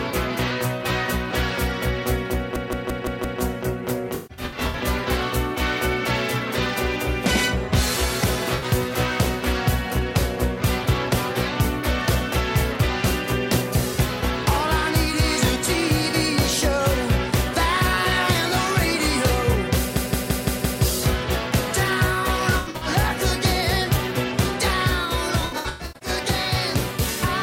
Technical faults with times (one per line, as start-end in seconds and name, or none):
2.56-3.41 system hang loop
4.14-4.79 AAC frame loss with concealment
8.56-8.64 AAC frame loss with concealment
19.97-20.82 system hang loop
22.51-22.87 AAC frame loss with concealment
25.41-26.09 AAC frame loss with concealment